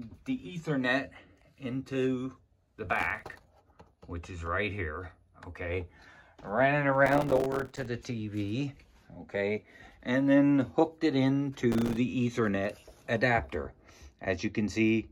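A gritty burst of crackle tears through the sound from 2.87 to 3.44 s, again and longest from 7.06 to 7.85 s, and briefly from 11.72 to 11.97 s. This is processor overload crackle. The processor couldn't finish its very short buffers, around 3 ms each, on time. Dozens of deadlines were missed in a row, and each miss left a hard-edged gap of silence. The rapid string of gaps is heard as crackle until the load eases.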